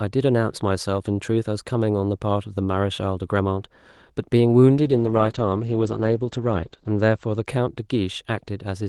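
A call bitrate drop from 4.75 to 7.51 s makes this speech turn rough and muffled, with the top end narrowing from 12 kHz to 8 kHz, consistent with the Opus encoder falling from about 32 to 11 kbps.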